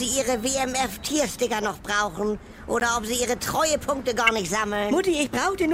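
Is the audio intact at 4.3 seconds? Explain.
No, there's a corrupt frame decoded from 4.27 to 4.29 s: one damaged frame played anyway, misplacing energy in frequency, so you get a chirp, squeak, blip or burst of noise with its error peaking around -5 dBFS.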